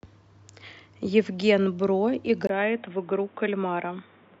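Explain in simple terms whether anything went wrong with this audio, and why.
At about 2.47 s the speech abruptly turns dull and boxy, after a tiny gap of about 20 ms, and it stays that way to the end. From there everything above roughly 3.8 kHz is gone, the voice drops a little in level, and a faint new background noise comes in underneath. That's the classic sign of an input switched to a poorer device, likely a jump from the main microphone to a headset or another cheaper mic mid-recording.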